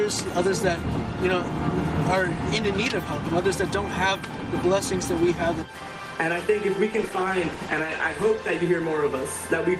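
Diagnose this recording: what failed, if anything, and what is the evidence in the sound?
A call bitrate drop at the network and codec stage: the bandwidth estimate fell and the encoder was starved of bits from 6.95 s to 9.11 s. The sound turns coarser and rougher there, worst for about 1.1 s, which fits a fall from 32 kbps to 14 kbps.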